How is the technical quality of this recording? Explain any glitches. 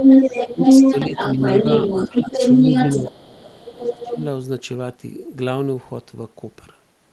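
The technical quality is poor: across the first four seconds of this speech, a second, far-end voice bleeds into the recording and the near-end talker is repeatedly pushed down. The call codec's band limit can be heard as content fading out above roughly 12 kHz, which fits Opus at a modest bitrate.

Other side's voice leaking through, 0.0 to 3.03 s and again 3.34 to 4.15 s. The likely cause is a loudspeaker at the talker's end replaying the remote party while the echo canceller fails to subtract all of it from the microphone. In the first stretch the leaked voice sits roughly 10 dB above the local speech, so it dominates. In the second it is about 5 dB below and sits underneath. On a spectrogram, two overlapping sets of harmonic stripes with different pitch contours appear.

Speech suppressed in double talk, 0.53 to 1.39 s, 2.08 to 2.38 s and 2.83 to 4.21 s. With both parties talking, the canceller likely cannot tell the local voice from the echo and attenuates everything. 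The dips total about 300 ms with up to about 10 dB of loss, then about 150 ms at about 5 dB, then about a full second reaching about 20 dB. The talker sounds pumped and partly gated. The waveform envelope shows sudden notches, and the spectrogram shows the upper harmonics dropping out.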